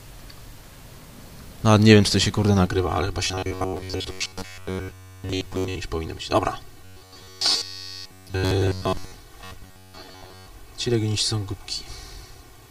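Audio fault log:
2.66–12.71 s, channel delay (comb filtering): one channel runs about 3 ms late and is summed to mono, cancelling at evenly spaced notches from around 200 Hz, so the sound turns hollow and phasey.
3.25–5.75 s, 6.85–9.14 s and 9.44–10.46 s, robotic sound from repeated short buffers: new audio likely arrives too seldom, so a roughly 10.7 ms buffer is replayed for most of each stretch. This imposes a rigid, metallic 93.8 Hz buzz.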